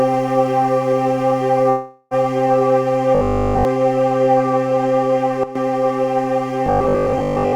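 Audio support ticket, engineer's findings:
Long network dropout, 1.69–2.14 s. Roughly 420 ms of audio lost, nearly all of it covered by a concealment buzz/hiss that fades, no silent gap. Likely jitter buffer starved by packet loss. Audio resumes with the lost section skipped, not delayed.

Robotic sound from repeated short buffers, 3.15–3.65 s and 6.66–7.54 s. Rigid metallic 50 Hz buzz, i.e. a 20 ms segment looped. The whole first span repeated, most of the second. Likely late buffer delivery. Unlike the dropout, the buzz keeps tracking the underlying sound roughly rather than fading out.

Sudden gain jump, 5.43–5.55 s. Level steps down by about 12 dB with no ramp. Sound and background noise drop together, which separates it from a natural fade or source change. Likely gain setting or bit shift applied unsmoothed in the digital path.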